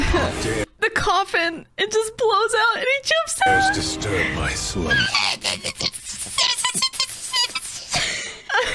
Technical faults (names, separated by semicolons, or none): none